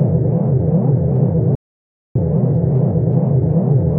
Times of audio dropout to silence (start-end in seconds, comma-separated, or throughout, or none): 1.55-2.15